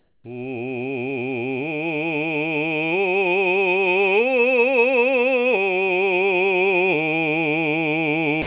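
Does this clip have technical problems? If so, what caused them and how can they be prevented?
Yes. From 0 to 0.24 s the real background gives way to comfort noise: a flat, featureless hiss about 6 dB quieter than what it replaces. It's likely discontinuous transmission: the background sits about 43 dB below the loud music, so the sender's detector treated it as silence. Turning off DTX on the sender would prevent it.

At the very end, from 8.42 s to the close, about 50 ms of the music gets dropped by the voice detector and comfort noise fills the gap. The music there was likely quiet enough to read as background. Disabling voice detection and DTX for music, or lowering the detector threshold, would keep that ending intact.

The band is also capped at 4 kHz throughout, which fits an ordinary narrowband G.711 call path and isn't a separate fault.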